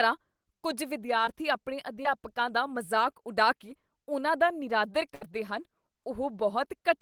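A brief smear breaks the speech at 1.25 to 1.29 s and again at 2.03 to 2.07 s, each lasting under 40 ms. These are short concealed packet loss: about 20 ms of the call arrived too late for the decoder each time. The receiver papered over the hole by extending the preceding sound, roughly 14 ms and 19 ms of synthetic fill respectively, before easing back into the genuine signal.

At 5.15 to 5.23 s a longer dropout is heard as a held, fading tail, about 80 ms in all, after which the speech picks up further along. This is a burst of packet loss: about 60 ms of audio never arrived, which fits several consecutive packets going missing. The receiver stretched the last sound over roughly 62 ms while lowering its level, then resumed with that stretch of the original skipped.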